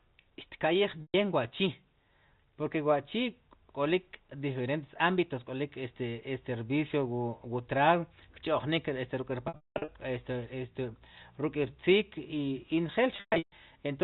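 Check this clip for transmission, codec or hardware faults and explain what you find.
Packet loss with pitch repetition occurs three times over the G.711 telephone-band line; the 4 kHz ceiling is audible but adds no damage.

Packet loss with pitch repetition at 1.02 to 1.14 s: a 120 ms gap is bridged by repeating the last pitch period, giving a briefly held, buzzy tone before speech resumes.

At 9.48 to 9.88 s, about 340 ms is lost across 400 ms, with the longest run 200 ms. The repeated pitch fades toward silence, then cross-fades back just before "este este ruk'rtziik".

At 13.16 to 13.52 s, 300 ms is lost across 360 ms, with the longest run 140 ms. This produces the same buzzy hold fading out, then a cross-faded return.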